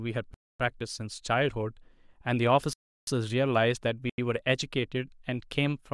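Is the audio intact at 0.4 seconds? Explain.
No. At 0.4 seconds the speech falls inside a block of digital silence that runs from 0.34 s to 0.60 s, a gap of 256 ms. Over that span the samples have been replaced by zeros, so the signal drops straight to silence and returns with no fade at either end. At this length it is heard as a short hole in the speech rather than a single tick.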